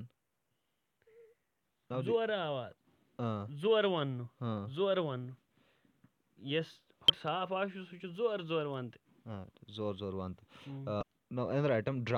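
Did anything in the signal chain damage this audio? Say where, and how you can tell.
Yes, there's damaged data in the compressed stream, so the fault sits at the codec stage, on storage or transmission of the encoded file. Listen at 7.08 to 7.10 s and again at 11.01 to 11.03 s: each is a brief glitch of about 20 ms that doesn't belong to the sound. That's corrupted bytes in the encoded frames. The decoder misreads them, loses sync, and spits out garbage until it locks onto the next valid frame header.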